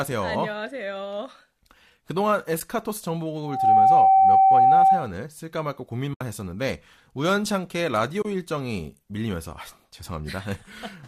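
Speech, likely carried over a low-delay AAC link, shows two faults. In AAC frame loss with muting, the decoder received no data for some frames and zeroed them, so the overlapping windows fade the sound out and back in, leaving soft-edged gaps. These occur at 2.6 s (10 ms), from 6.14 to 6.21 s (70 ms) and from 8.22 to 8.25 s (30 ms), which fits runs of one, seven and three 10 ms frames. From 3.42 to 5.12 s a loudspeaker feedback squeal appears. A microphone picked up the loudspeaker it was feeding, and the loop gain exceeded one at 773 Hz. That tone builds within a fraction of a second into a steady squeal well above the speech, then stops.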